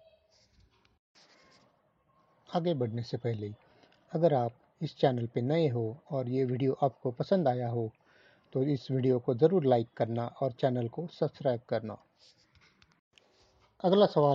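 No dropouts, distortion, level jumps or timing breaks can be heard anywhere in the clip.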